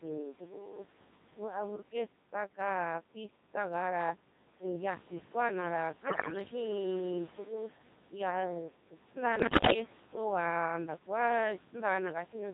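From the start the speech runs through noise suppressor artifacts. The steady background is pulled down by about 12 dB between phrases and comes back up under them. On a spectrogram the noise floor shows as blotchy, flickering patches rather than an even haze.

Also throughout is the Codec 2 vocoder, applied heavily. The robotic, buzzy timbre fits its 2.4 kbit/s mode, which rebuilds the voice from pitch, voicing and a coarse spectral envelope instead of keeping the waveform. A spectrogram shows rigid, evenly spaced harmonics with smeared formants, and the waveform loses its natural shape.

At 6.08 to 6.40 s and again at 9.40 to 9.74 s, bit errors on digital voice radio corrupt the vocoder's parameters. A high share of the bits flip in the first burst and somewhat fewer in the second, so pitch, level and tone jump from frame to frame into bleeps and garbled warbling. The spectrogram shows harmonics leaping abruptly, and the waveform's envelope becomes erratic. 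Through both bursts the room noise remains about 16 dB below the speech.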